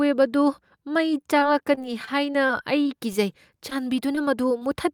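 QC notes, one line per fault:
1.21–3.16 s, repeated packet loss (robotic sound): The speech turns choppy, with small pieces missing. Audio kept failing to arrive in time, leaving about nine short holes, the longest about 23 ms. Each hole was patched by stretching the last sound forward, about 150 ms of fill in all, roughly 8% of the span. The patches come close together, so the speech keeps breaking up.
3.70–3.73 s, 4.15–4.19 s, 4.59–4.63 s, short concealed packet loss: Each spot has a brief smear or wobble, a tiny glitch in the flow of speech. About 20 ms of audio was lost at each point. The receiver filled each hole by continuing the preceding sound for roughly 14 to 21 ms, then blended back into the real signal. The repeats arrive at intervals of about 0.4 s.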